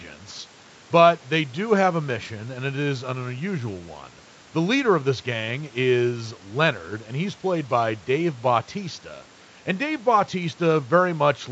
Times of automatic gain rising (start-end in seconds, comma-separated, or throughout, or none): none